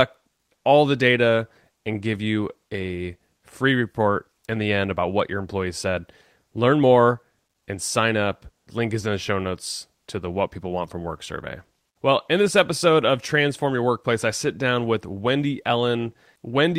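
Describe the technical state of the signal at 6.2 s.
At 6.2 s the speech signal is intact, with no fault present at that moment.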